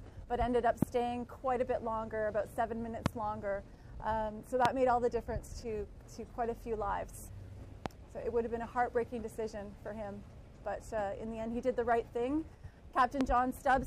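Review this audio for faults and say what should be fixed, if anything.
Loud pops appear at 0.82–0.85, 3.06–3.08, 4.65–4.68, 7.86–7.88 and 13.21–13.23 s. Each is a single sharp burst of about 20 ms, around 20 dB above the sound and near 25 dB at 4.65 s. They are likely caused by brief voltage pulses from a connector, switch, static discharge or driver glitch. Unlike dropouts, the sound continues unbroken beneath each pop. To prevent them, secure the cabling and grounding and mute the path before switching anything.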